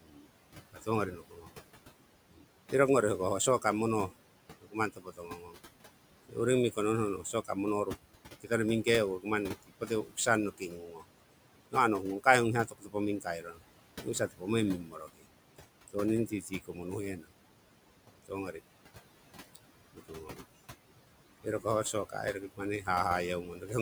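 Noise suppressor artifacts run through the whole of this speech recording. The suppressor pulls what it judges to be steady noise down by about 18 dB, frame by frame, so the room noise, which sits about 14 dB below the voice, drops away in the gaps and swells back under each phrase. Speech cut by the noise suppressor appears in three stretches: 0.01 to 2.5 s, 3.62 to 20.41 s, and 21.43 to 23.71 s. In each stretch the suppressor mistakes parts of the speech for background and turns them down along with it, by as much as about 19 dB in the first two and about 13 dB in the last. Soft consonants and word endings come out swallowed or faint, adding up to well under a second in the first stretch, roughly four seconds in the long middle one, and a few tenths of a second at the end.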